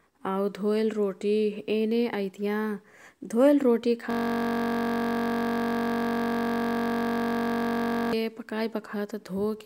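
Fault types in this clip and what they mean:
System hang loop: from 4.11 to 8.13 s the speech freezes into a single 21.33 ms slice repeated nearly 190 times. This produces a steady 46.9 Hz buzz as the hardware keeps replaying a stalled ring buffer, which fits a 1024-sample buffer.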